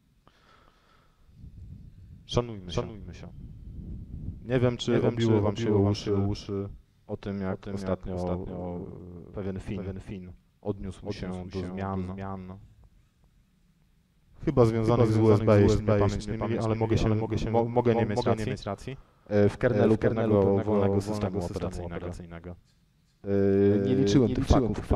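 From start to finish, a doubled audio track runs throughout. A second full-band copy trails by roughly 0.4 s, about 5 dB quieter. It has no decay or room colour. A slower capture path, or two copies held out of step, likely mixed it in twice.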